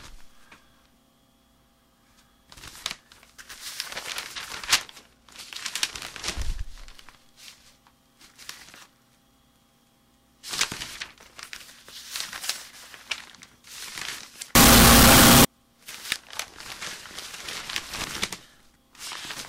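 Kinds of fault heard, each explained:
Float read as integer: from 14.55 to 15.45 s, sound becomes a harsh, near-square blast at an almost fixed, high level, likely float samples read as integers; unlike clipping, quiet background blares too.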